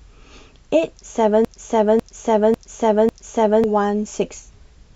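From 1.45 s to 3.64 s the speech falls into a broken-record loop. A 0.55 s fragment repeats four times back to back, likely from a stalled player or stream. On a spectrogram it shows as identical repeating blocks.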